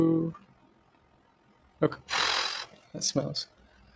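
From the start and through the whole clip, the level flutters at a steady rate of around 40 Hz with a depth of about 6 dB. This is overlap-add ripple. The audio was split into windowed frames and rejoined with an overlap that does not add back to a constant gain, so the loudness dips and recovers once per frame. The result is a rough, robotic tremolo. It differs from a suppressor's pumping because it is perfectly regular and does not depend on what the sound is doing.

Also present throughout is a noise suppressor applied to music or sounds. This is a speech-oriented suppressor treating sustained content as noise, with its gain swinging by something like 15 dB. Onsets get through, while held parts and decays are pulled down, so the sound thins and pumps irregularly with the material. That irregularity separates it from the fixed-rate frame ripple. Above 8 kHz there is nothing, as expected from the call microphone chain.

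From 0.51 to 1.7 s, covering roughly a second in total, comes sound cut by the noise suppressor. The suppressor judged this stretch to be noise and lowered it further than its surroundings, by up to about 7 dB at the deepest point. Sustained and fading material sinks and its tail is shortened.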